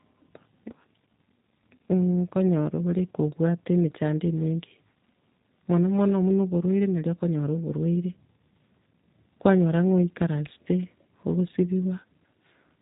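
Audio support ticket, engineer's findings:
G.729 codec, full clip. Symptom: band-limited speech, slightly rough and synthetic, with plainly audible codec damage. Cause: vocal tract filter, pitch predictor and sparse pulses rebuilding each 10 ms frame, which fits an 8 kbit/s G.729A path. Spectrogram: hard ceiling at 3.8 kHz, empty above. Harmonics look smeared and blocky at frame granularity. Waveform: envelope intact, fine cycle detail simplified.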